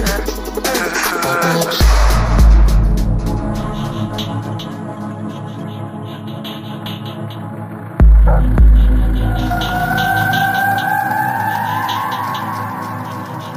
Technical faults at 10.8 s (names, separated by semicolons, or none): none